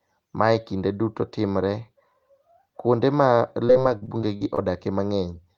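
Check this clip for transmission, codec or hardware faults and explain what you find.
There's one transmission fault. Between 3.67 and 4.59 s there's repeated packet loss (robotic sound): eight gaps, up to 42 ms each, are filled by extending the previous sound, leaving the speech choppy with pieces missing.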